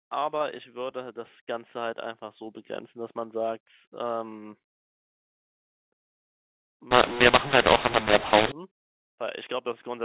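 From 6.91 s to 8.52 s the speech turns harsh and distorted, with pauses filling with noise: a mu-law and A-law mix-up, where mu-law-coded telephone samples are decoded with the A-law curve, scrambling levels and lifting the quietest samples well above silence.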